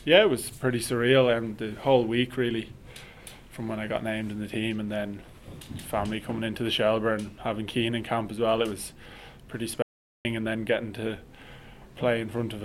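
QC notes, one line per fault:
9.82–10.25 s, playback stall: the player likely ran short of data or had its output thread blocked, so nothing was delivered to the output for about 0.43 s. The sound cuts off abruptly in mid-flow, holds in silence, then resumes.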